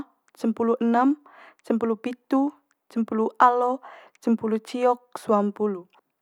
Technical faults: none

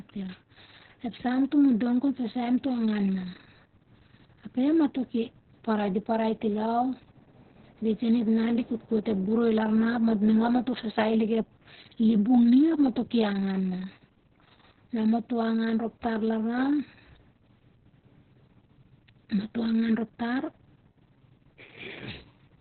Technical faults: Opus voice compression

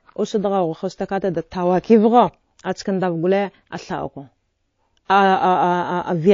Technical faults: MP3 compression; pre-echo

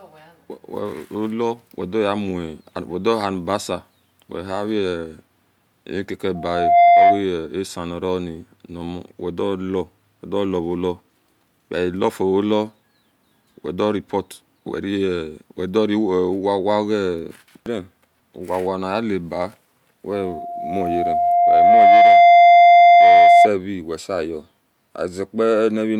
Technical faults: loudspeaker feedback squeal

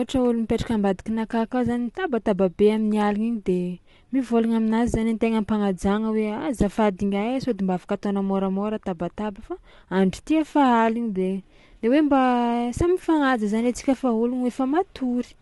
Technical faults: low-delay AAC compression

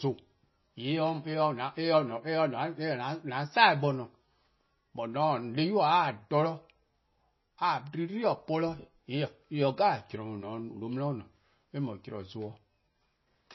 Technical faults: MP3 compression

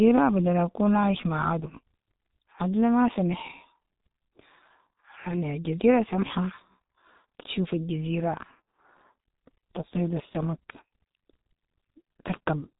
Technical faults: G.723.1 codec

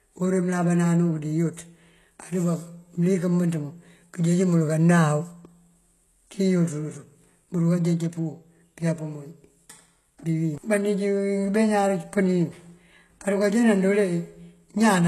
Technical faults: HE-AAC compression

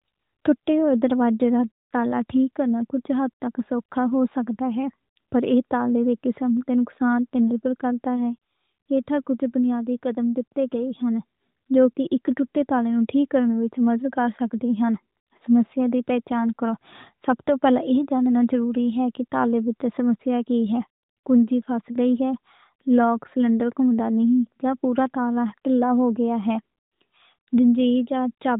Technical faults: none

